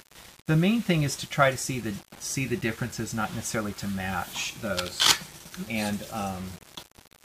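From start to finish the audio appears to have been reduced to around 7 bits and rounded without dither, which is the likely cause of what is heard: low bit depth without dither. With so few steps available, the rounding error tracks the waveform instead of forming a steady hiss, sitting roughly 20 dB below the signal. The result is a grainy, gritty distortion that shifts with the sound, coarsest in quiet passages.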